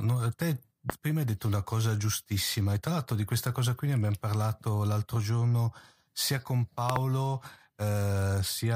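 At 0.90 to 0.92 s there's a loud pop, a single sharp hit sitting roughly 20 dB above the speech, then a double pop from 6.90 to 6.98 s. That's likely a voltage pulse from a plug, switch or static getting into the line. The speech carries on underneath both.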